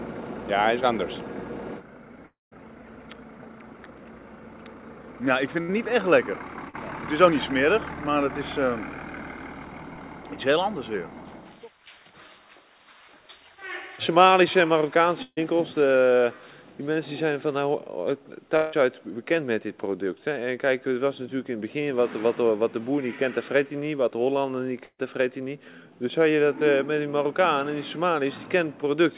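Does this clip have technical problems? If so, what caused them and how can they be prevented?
Yes. The clip passed over a call path using G.711 mu-law at 64 kbps, so nothing reaches above 4 kHz.

Long network dropout, at 2.26 to 2.53 s and 18.57 to 18.74 s: audio likely stopped arriving, and the receiver stretched the last sound into a buzz or hiss that fades. At 2.26 s it leaves about 180 ms of silence. A steadier connection or a wired link would help.

Burst of packet loss, at 5.61 to 5.72 s, 15.23 to 15.39 s and 24.84 to 25.00 s: 80 to 140 ms went missing each time. You hear the last sound held and fading, as a buzz or a hiss, and the later two drop into brief silence. A bigger jitter buffer or forward error correction would cover it.

Short concealed packet loss, at 6.70 to 6.76 s and 9.94 to 9.99 s: 20 to 40 ms gaps were papered over with continued sound, giving a quick smear or wobble. 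Packet loss concealment with redundancy would soften these.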